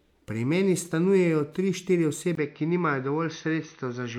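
Speech, with an abrupt change at 2.35 s: after a brief gap of about 20 ms, the sound turns dull and band-limited, with nothing above 6.2 kHz, and a faint new noise floor appears while loudness stays essentially the same. This is likely an input switched to a poorer device.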